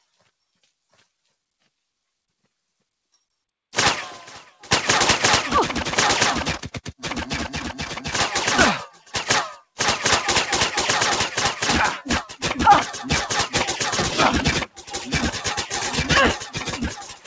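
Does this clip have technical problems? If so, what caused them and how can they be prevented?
Yes. Throughout the clip the level pumps and flutters by around 10 dB: attacks come through, but held sounds and tails keep sinking and thinning. This is a noise suppressor applied to music or sounds. The speech-tuned processing mistakes steady tones and ambience for noise and pulls them down. Turning the suppressor off, or switching to a music mode, for non-speech audio would prevent it.

The sound is cut by the noise suppressor more sharply at five points: 8.91–9.14 s (about 10 dB), 12.28–12.43 s (about 13 dB), 14.66–15.11 s (about 18 dB), 15.33–15.89 s (about 11 dB), and from 16.34 s to the end (about 17 dB). At each one, sustained or decaying material sinks or has its decay cut short. The same fix applies: bypass the suppressor when the source isn't speech.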